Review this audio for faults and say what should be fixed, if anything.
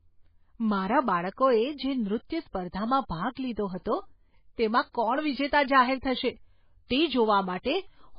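MP3 compression, throughout: nothing above 5 kHz, with heavy watery swirl on the speech, likely from a bit-starved encoder dropping weak frequency lines, which fits about 16 kbps. Prevent it by re-encoding from the original source at a much higher bitrate or keeping a lossless copy.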